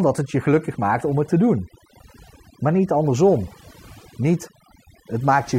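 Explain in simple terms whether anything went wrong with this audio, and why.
Yes, something went wrong: this speech clip suffers from overdone noise removal, and it runs from start to end. A noise reduction tool was pushed too hard on a noisy recording. It cut away any part of the sound that looked like background noise, including the quieter parts of the voice. The background drops and breaks into twinkling, warbling specks, and the voice can come across as watery or thin.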